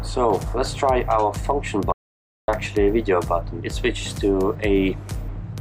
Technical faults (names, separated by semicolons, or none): mains hum; audio dropout to silence